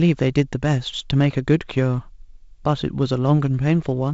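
No faults are present in the speech; it comes through the G.722 wideband telephone path with bandwidth reaching about 7.7 kHz and the faint hiss of light coding damage, which fits the 48 kbit/s mode.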